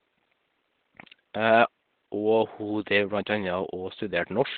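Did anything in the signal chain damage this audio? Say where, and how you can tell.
Yes. Opus compression throughout, at the codec stage: the speech sounds narrowband, muffled and hoarse, likely from its SILK speech mode, which fits a bitrate around 12 kbps.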